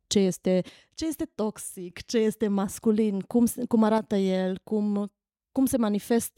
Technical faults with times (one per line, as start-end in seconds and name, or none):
0.69-1.90 one channel drops out
3.98-4.07 one channel drops out